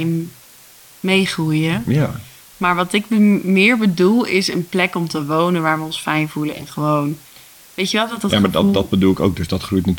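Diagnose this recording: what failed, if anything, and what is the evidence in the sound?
The sample-format conversion stage failed: low bit depth with dither. A constant, even hiss sits under the speech for the whole clip, roughly 25 dB below it, with no distortion. The speech was reduced to what sounds like about 7 bits, and the dither turned the rounding error into steady white noise.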